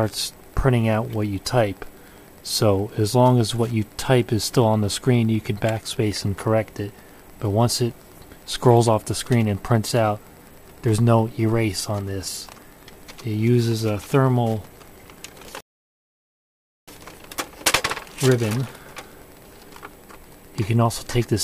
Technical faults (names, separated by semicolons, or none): Wi-Fi interference; rebuffering stall